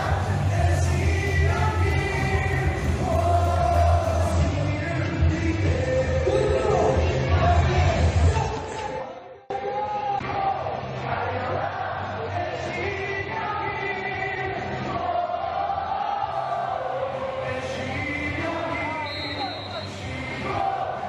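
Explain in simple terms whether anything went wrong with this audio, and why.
Something did go wrong. From 4.32 to 16.32 s, the adaptive stream switched to a lower bitrate because the connection slowed. The sound changes suddenly, with no gap. Treble above 8.3 kHz vanishes, and compression artefacts grow.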